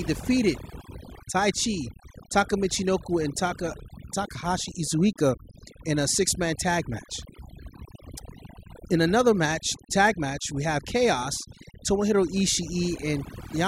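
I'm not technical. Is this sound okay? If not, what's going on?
No. From start to finish, the background in the pauses drops away and breaks up into twinkling specks. This is overdone noise removal: a cleanup tool set too strong cut away background noise and quieter parts of the voice along with it.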